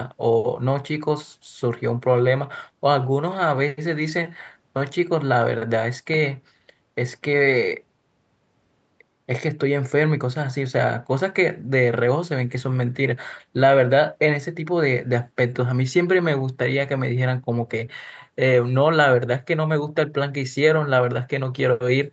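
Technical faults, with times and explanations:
No technical faults can be heard in this speech clip. Its content stops at about 8 kHz, which fits a call path using a wideband codec such as Opus after ordinary call microphone processing.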